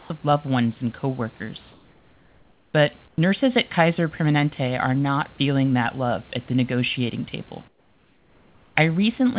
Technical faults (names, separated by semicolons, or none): comfort noise in place of the background